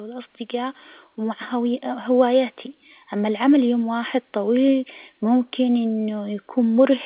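No technical faults can be heard in this speech recording. It carries the narrow telephone band of G.711 A-law coding, with nothing above 4 kHz, which is how that path normally sounds.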